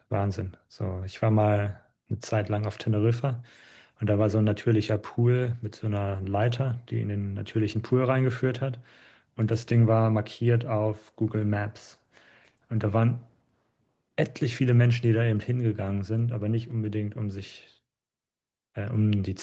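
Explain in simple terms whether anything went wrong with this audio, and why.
From about 9.5 to 13.8 s there's a call bitrate drop: the connection tightened, so the codec coded the speech coarsely, making it sound rougher and more watery.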